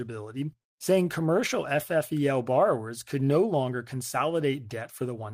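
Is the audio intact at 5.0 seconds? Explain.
Yes, at 5.0 seconds the speech plays through cleanly, with no dropout, click, distortion or other break in the sound.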